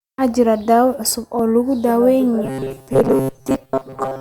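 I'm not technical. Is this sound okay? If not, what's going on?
No. At 1.39 s, just after "daawayn cusub", there is an overlap between stream segments: two 2-second chunks overlapped and the join was trimmed, leaving a tiny skip. From 2.45 s to 4.21 s the speech turns into a robotic sound from repeated short buffers, a metallic buzz near 133 Hz. Most of the real audio there is likely lost while roughly 7.5 ms snippets are replayed.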